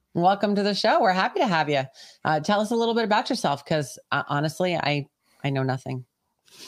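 Speech recording with no audible technical faults.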